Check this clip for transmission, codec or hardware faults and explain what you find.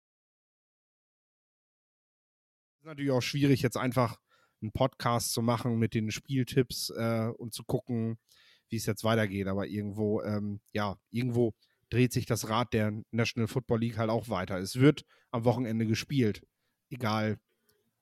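Nothing stood out on listening to this speech, and the smooth fade-in that begins around 3 s and reaches full level by 3.58 s is an ordinary editing fade with no click or hard edge.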